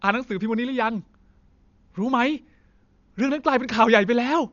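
Throughout, the speech sounds dull, with nothing above 7 kHz and rough, fluttering noise. Heavy Dolby Digital compression, at a bitrate near 48 kbps, is the likely cause.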